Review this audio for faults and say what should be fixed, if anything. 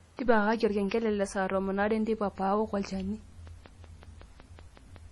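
Throughout the speech there is likely transcoding between lossy codecs, probably a low-bitrate MP3 re-encoded as HE-AAC. Smeared, swirly artefacts from both stages stack, and a spectrogram shows a hard ceiling at 12 kHz with patchy, blocky high bands. To prevent this, encode once from the original source.

From 3.47 to 4.97 s a train of clicks, about ten, ticks at a regular 5.4 per second, peaking about as loud as the speech. These are likely interference pulses or a struggling interface. The waveform shows evenly spaced spikes, and the spectrogram shows thin vertical broadband lines. To prevent this, shield or separate the cabling from nearby equipment and check the interface connection.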